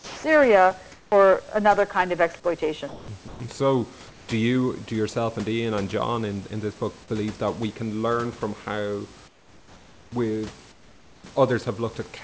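From 0.00 to 0.24 s the room background turns into a smooth, featureless hiss, about 5 dB quieter. This is comfort noise in place of the background, likely from discontinuous transmission. It happens again at 0.92 to 1.12 s, about 2 dB down. The receiver is filling a pause with synthetic noise shaped only roughly like the real room. The detail of the actual background goes missing.

At 2.88 to 3.08 s, and again at 3.28 to 3.40 s just before "so do you do", speech gives way to steady noise. This is sound dropped by the voice detector. The detector likely took quiet speech or a word ending for background. About 100 ms of speech is lost in the first gap and about 50 ms in the second. The sound comes back when the detector triggers again.

The comfort noise returns at 4.08 to 4.28 s, before "do you do yourself", about 3 dB quieter than the real background. After "can learn from how", from 9.28 to 10.12 s, the background becomes flat synthetic noise about 6 dB lower. 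The same happens at 10.72 to 11.24 s, also about 6 dB down. On the call path, nothing is heard above 8 kHz.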